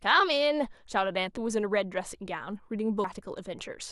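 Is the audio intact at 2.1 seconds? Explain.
Yes, at 2.1 seconds the speech runs through without any audible dropout, click, distortion or other technical fault.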